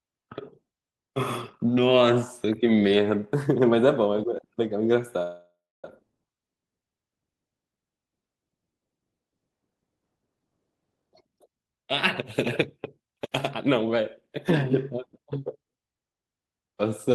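A call audio freeze from 5.22 to 5.85 s interrupts this speech recording. The sound hangs on as a decaying buzz and then about 270 ms of silence, likely because delayed packets drained the jitter buffer. Speech resumes where it stopped, losing nothing but running about 0.6 s later. Jitter buffer speed-up follows at 10.96 to 11.87 s, where speech runs at 141% speed, and at 12.77 to 15.27 s, at 109%. Repeated trimming of pitch-period slices removes roughly 0.4 s and then 0.2 s of backlog, so delivery sounds hurried while pitch holds steady.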